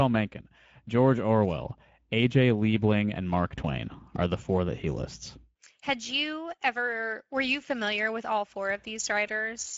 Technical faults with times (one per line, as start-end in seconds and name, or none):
0.00-9.77 Speex codec